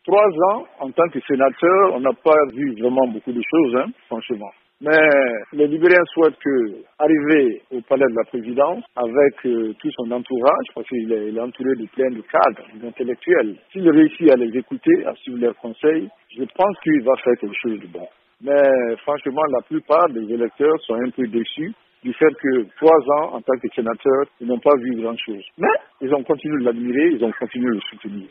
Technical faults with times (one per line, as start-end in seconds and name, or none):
none